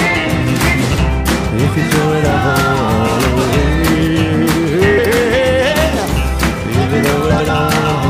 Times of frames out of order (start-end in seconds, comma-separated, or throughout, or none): 0.89-0.99, 4.98-5.13, 7.30-7.50